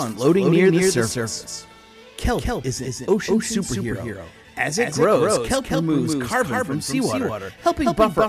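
Right through the clip there's a doubled audio track: a full-band copy trails about a fifth of a second behind, a bit quieter, dry and flat, likely from a second capture path.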